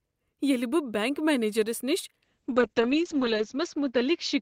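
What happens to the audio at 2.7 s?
At 2.7 s you're inside a call bitrate drop that starts at 2.25 s and runs to the end. The encoder got squeezed from 40 down to 7 kbps, so the speech turns coarse and watery, and the top end is cut from 20 kHz to 8 kHz, making it muffled.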